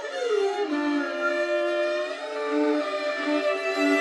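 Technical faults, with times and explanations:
The music carries no technical faults. There is nothing in it to time or explain.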